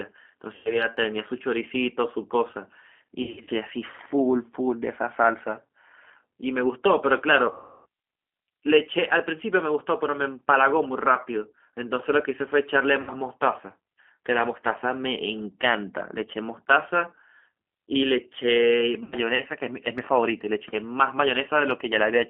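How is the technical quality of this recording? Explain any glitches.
The quality is poor. The speech runs through a narrowband, low-bitrate codec for the whole clip, and it breaks up in five places where packets were dropped and the decoder filled the gaps.

The G.729 codec is present throughout. It rebuilds speech from a vocal tract model and a few coded pulses per frame, which fits an 8 kbit/s G.729A stream. Only about 250 Hz to 3.4 kHz survives, and the voice sounds plainly rough, thin and synthetic.

VoIP packet loss concealed by the speech codec occurs at 0.55–0.86 s (about 100 ms lost), 3.23–3.51 s (160 ms scattered over 240 ms), 7.52–7.86 s (340 ms), 13.01–13.11 s (60 ms) and 19.04–19.16 s (80 ms). In each gap the decoder stretched its last pitch and filter with falling gain, so the voice turns into a buzzy tone or coloured noise that fades. The longest is at 7.5 s.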